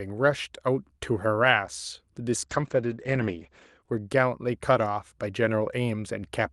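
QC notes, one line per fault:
2.44–3.87 s, call bitrate drop: the encoder falls back to a much lower rate, and the coarse quantisation turns the sound rough and watery for about 1.35 s. The audio bandwidth also narrows from 12 kHz to 8 kHz, so the upper band goes muffled until quality steps back up. The change in texture points to a rate falling from around 48 kbps to roughly 11 kbps on the Opus call path, following a dip in the bandwidth estimate.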